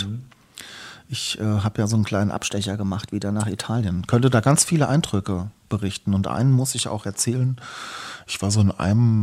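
After "ja so einen kleinen", from 2.34 to 3.81 s, the speech jumps 6.22% faster and rises by 104 cents, then returns to normal. After "einen muss ich auch", from 7.36 s to the end, it drops 6.22% slower and falls by 111 cents. This is likely a drift correction step, a clock-matching rate change made all at once. Unlike wow, which wavers continuously, speed and pitch shift together in a single step.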